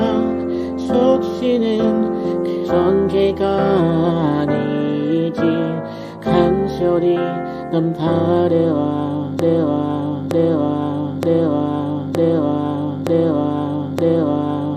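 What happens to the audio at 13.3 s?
At 13.3 s the audio is stuck in a broken-record loop. It runs from 9.39 s to the end. A 0.92 s fragment repeats exactly, back to back, six times. The likely cause is a stalled player or stream resending its last buffer. The intended audio is lost.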